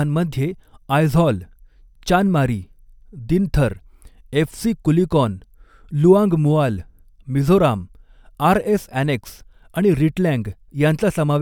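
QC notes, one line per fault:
No fault found.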